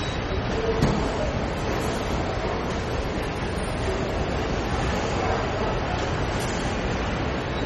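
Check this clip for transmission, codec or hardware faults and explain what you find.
One fault runs through the whole clip. Throughout, the sound is watery and swirly with smeared attacks and nothing above 12 kHz, likely MP3 compression starved of bits, which fits roughly 32 kbps.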